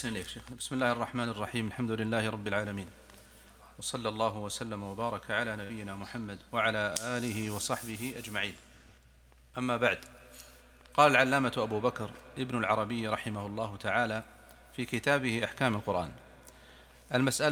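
At 5.63 s a burst of packet loss cuts out about 60 ms of audio, ending near 5.74 s. The receiver fills the gap by extending the last sound for roughly 61 ms while fading it down, so a brief held tail is heard before playback resumes further on.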